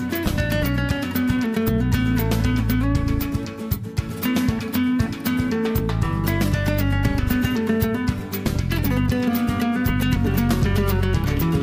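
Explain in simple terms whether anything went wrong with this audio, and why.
Nothing went wrong here: there are no glitches, dropouts or other technical problems anywhere in this audio, so there's nothing to explain away.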